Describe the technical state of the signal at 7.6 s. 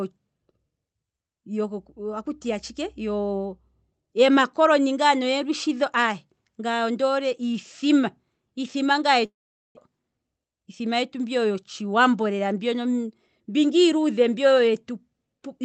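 At 7.6 s the speech is intact, with no dropout, glitch or other fault, only the steady, band-limited sound of the call path it travelled through.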